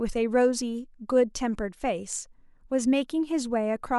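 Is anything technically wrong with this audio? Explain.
No, nothing technical stands out here; the speech comes through steadily with nothing that calls for a closer look.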